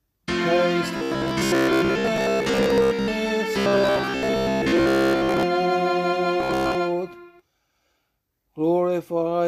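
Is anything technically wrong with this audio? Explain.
Yes. Robotic sound from repeated short buffers occurs at 0.97–3.08 s, 3.59–5.44 s and 6.40–6.75 s. It likely comes from late-arriving audio being filled by looping a roughly 15 ms fragment, skipping most of the real signal and imposing a rigid, metallic 66.8 Hz buzz.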